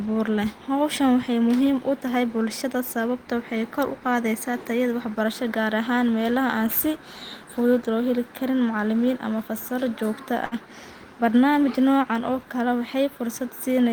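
At 10.45 s, a burst of packet loss hits the speech for about 60 ms. The receiver stretches and fades the last sound over the gap, then resumes with audio missing.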